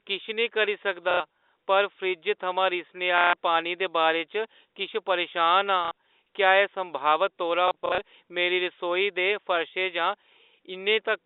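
Packet loss with last packet repeated: the receiver replayed the last good packet at 1.11 s after "किश नेईं करी", at 3.18 s before "पानी दे", at 5.85 s and at 7.68 to 7.98 s. The repeated runs buzz near 33 Hz, which fits 30 ms packets, giving brief robotic stutters.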